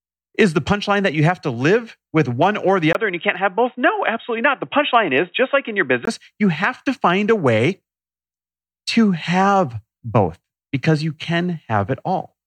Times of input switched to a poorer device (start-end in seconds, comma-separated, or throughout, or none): 2.93-6.07